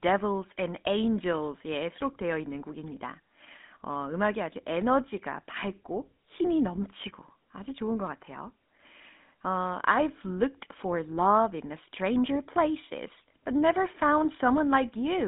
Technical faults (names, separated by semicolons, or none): GSM full-rate codec